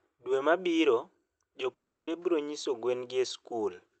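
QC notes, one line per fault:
1.73–2.09 s, long network dropout: the speech breaks off and the last sound smears into a buzz that fades, leaving near-silence for about a third of a second. The speech then resumes with that stretch missing. This is likely a run of lost packets that the call decoder tried to conceal.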